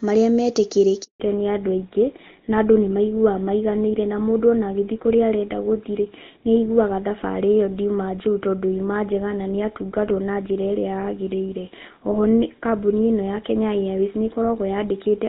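At 1.04 s a handover gap silences the sound for 160 ms until 1.20 s: a clean dropout as the call switches networks, not a gradual fade or crackle. From 1.20 s to the end, a fallback to narrowband removes everything above 4 kHz, leaving duller, rougher sound. Unlike the earlier HD Voice wideband, this band limit persists and fits an older codec such as GSM full rate.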